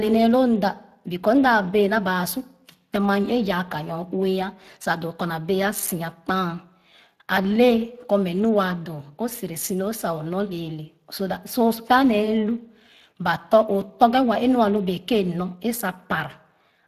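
Speex codec damage runs through the whole clip, from start to finish. Speex is a CELP speech codec that models the voice as a filter driven by a coded excitation signal. The detail lost in that coding is plainly audible here as a coarse, processed texture on the speech, and the roughness fits a rate of roughly 22 kbps. The spectrum also stops at about 15.4 kHz, with nothing above it.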